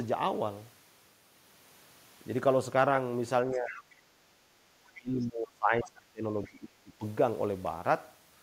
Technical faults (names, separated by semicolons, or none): speech suppressed in double talk; background gated by the echo canceller; other side's voice leaking through